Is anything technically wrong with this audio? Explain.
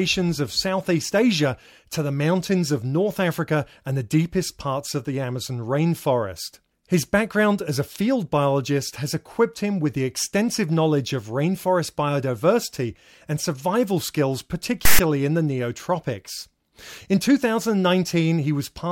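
Yes. From 14.85 to 14.99 s the speech is interrupted by file tags played as audio: a block of text metadata has been decoded as if it were sample data. Because text bytes cluster in a narrow range of values, they form a loud, harsh rasp pushed to one side of zero rather than centred noise. On a waveform this shows as a hard-edged, asymmetric slab lasting about 0.14 s; a spectrogram shows a sudden broadband band with vertical edges.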